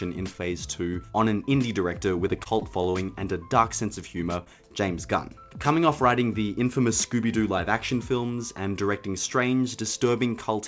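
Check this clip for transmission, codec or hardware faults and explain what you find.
Two transmission faults can be heard, both from lost packets on a call link. Nothing is heard above 8 kHz, which fits a wideband call codec such as G.722 at around 64 kbps.

Repeated packet loss (robotic sound) runs from 2.28 to 3.10 s. Packets went missing seven times. Each gap was patched by extending the previous sound. About 120 ms was lost in total, the longest gap 39 ms. The stretch sounds choppy and robotic, with pieces missing.

Short concealed packet loss occurs at 4.44 to 4.48 s. About 20 ms never arrived in time. The receiver continued the last sound to cover it, then blended back into the real audio. It is heard as a brief smear or wobble.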